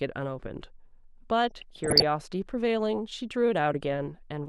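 Speech, with DAB burbling from 1.51 to 2.04 s. Bit errors at a rate under half a percent corrupt MP2 sub-bands, producing short noise blips that show as brief flares across scattered spectrogram bands.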